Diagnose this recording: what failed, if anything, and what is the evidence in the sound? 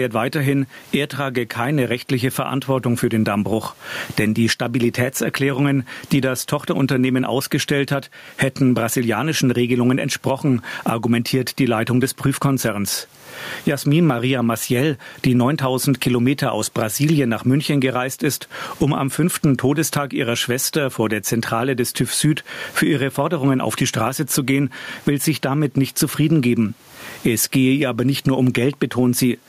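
Gain pumping runs throughout the speech. The room noise sits about 44 dB under the speech, and the gain swings by around 20 dB. The likely cause is microphone gain set far too high at capture, with a fast limiter clamping each peak.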